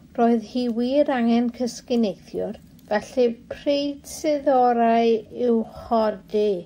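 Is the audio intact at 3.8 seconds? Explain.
No. At 3.8 seconds the speech sits inside a time-stretched section running from about 3.0 s to the end, slowed to roughly 0.65x speed, likely by software repeating short pieces to lengthen it while holding pitch. It drags, and a spectrogram shows drawn-out harmonics.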